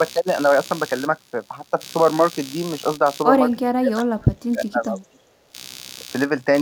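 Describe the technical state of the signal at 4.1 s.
At 4.1 s the speech sits inside a stretch of speech suppressed in double talk running from 3.71 to 5.2 s. The level dips sharply, at worst by around 30 dB, with about a second affected in total. The likely cause is an echo canceller that, with both sides talking, could not separate this talker from the loudspeaker echo and attenuated both.

Computer activity noise also runs underneath at this moment, as it does across the whole clip. It is a buzzing pulse at about 70 per second, roughly 20 dB below the speech. It comes from processor or peripheral load shifting the audio circuit's shared ground, so it tracks the computer's activity rather than the sound.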